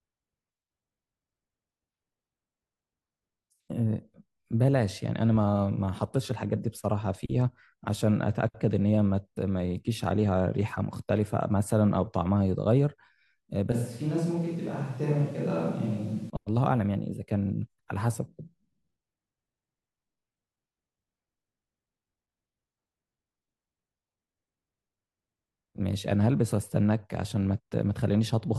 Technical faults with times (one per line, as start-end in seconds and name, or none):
13.72-16.30 switch to a distant microphone